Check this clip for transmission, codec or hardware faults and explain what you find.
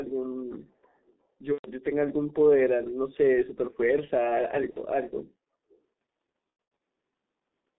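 Yes, there are two problems: heavy low-rate codec damage across the whole recording and three patches of concealed packet loss.

The G.723.1 codec runs throughout. The speech is squeezed into roughly 200 Hz to 3.7 kHz and sounds muffled and hoarse, with smeared consonants. It runs at around 6.3 kbit/s, with coarse 30 ms framing and a slow update of the voice model.

VoIP packet loss concealed by the speech codec occurs at 1.53–1.71 s (about 120 ms), 4.70–4.79 s (about 60 ms), and scattered across 6.50–6.80 s (about 210 ms lost, with the longest gap 90 ms). The decoder keeps repeating its last pitch and filter at falling gain, so the speech stretches into a buzzy tone or coloured noise that fades.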